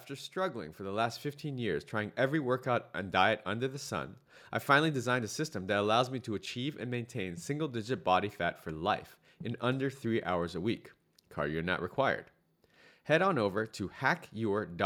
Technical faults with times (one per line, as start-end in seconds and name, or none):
0.07-2.23 automatic gain rising